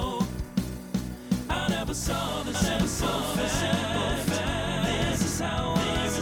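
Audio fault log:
2.54 s to the end: doubled audio track. From 2.54 s a second full-band copy of the sound runs about one second behind the original, at roughly the same level, so everything is heard twice out of step. This is likely a second capture through a slower path, or an edit that left two copies offset. Unlike an echo or reverb, the copy has no decay, no room colouring and no repeated fading returns, and it starts abruptly rather than building up.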